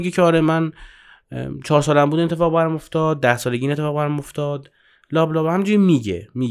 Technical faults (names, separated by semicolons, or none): none